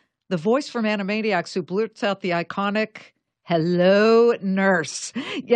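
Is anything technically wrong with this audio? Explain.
No, the speech signal shows no technical faults.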